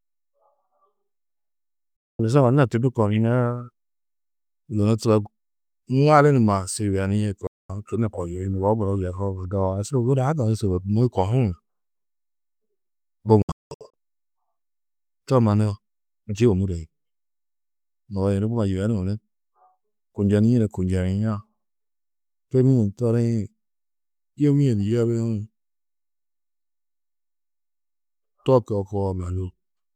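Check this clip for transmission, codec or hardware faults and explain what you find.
The speech is interrupted three times by digital broadcast dropout. Each time the receiver stopped getting valid frames and muted until good ones returned, so the audio snaps to silence with a fade of about 3 ms and resumes later, with the material in between gone. At 1.96 to 2.20 s and again at 7.47 to 7.70 s there is a single clean hole of about 224 ms. At 13.42 to 13.94 s the loss is broken into several short holes totalling 352 ms, the longest 192 ms.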